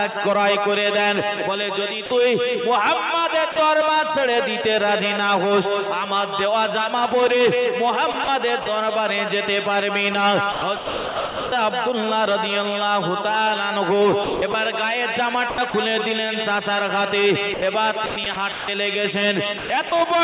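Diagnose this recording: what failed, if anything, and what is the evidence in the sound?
Call processing: the sender's voice detector likely mistook sound for background at 2.06 s and 3.52 s. Each time it was dropped for 40 ms and replaced by comfort noise.

Call processing again: the voice detector likely toggled transmission repeatedly at 8.12–8.66, 10.52–11.52, 14.24–14.54, 15.5–15.74, 17.54–18.68 and 19.58–19.92 s. This sound chopped by the voice detector leaves holes filled with comfort noise through the G.711 path, which has nothing above 4 kHz.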